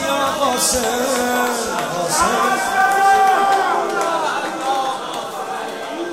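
Nothing in the audio stands out as a technical fault, so there's nothing here to flag.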